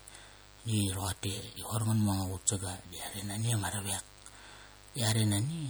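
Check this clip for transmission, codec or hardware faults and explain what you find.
Two problems run through the whole clip, start to finish.

A mains buzz sits under the speech the entire time, roughly 25 dB below it. It's built on 50 Hz. Something like a dimmer, a rectifier or a missing shield is letting sharp switching spikes in twice every cycle, and those spikes carry a long ladder of harmonics well up into the kilohertz range. So you don't get a smooth hum. You get a steady, raspy buzz that never lets up.

The speech itself has a watery, swirly quality that's plainly audible, with s sounds turning chirpy and metallic and consonant attacks smeared. That's most likely MP3 compression at a low bitrate, something in the region of 64 kbps. When the encoder runs short of bits it zeroes out weaker frequency lines, and they flicker on and off from frame to frame. There's no low treble cut here, though. 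The content reaches up to about 21.1 kHz, so the damage comes from that flickering, not from missing top end.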